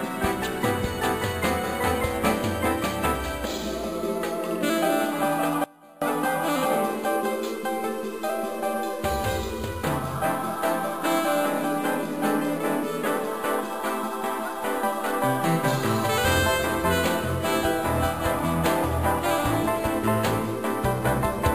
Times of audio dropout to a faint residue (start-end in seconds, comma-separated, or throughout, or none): 5.64-6.02